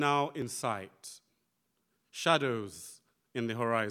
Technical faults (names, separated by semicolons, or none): repeated buffer